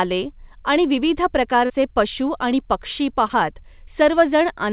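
Short concealed packet loss occurs twice in this speech: at 1.66 to 1.71 s, between "आणि विविध" and "पशू आणि पक्षी", about 40 ms failed to arrive, and at 3.27 to 3.31 s, right after "पशू आणि पक्षी", another 20 ms. Each time the receiver extended the preceding sound to cover the gap, leaving a brief smear or wobble inside the narrow, sub-4 kHz band of the G.711 call path.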